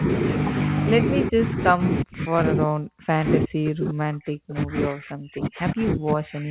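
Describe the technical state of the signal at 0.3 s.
At 0.3 s the speech is intact with no fault, its content stopping near 4 kHz in the way expected of a narrowband call path such as G.711 mu-law.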